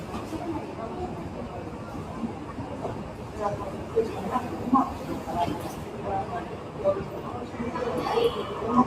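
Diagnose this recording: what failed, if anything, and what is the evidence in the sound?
Noise suppressor applied to sounds, throughout: a speech-oriented call-processing stage treats steady sound and tails as noise, pumping level by about 5 dB.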